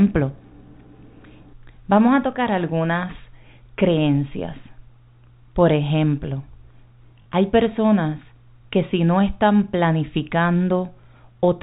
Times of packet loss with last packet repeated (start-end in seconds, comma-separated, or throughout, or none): 7.22-7.26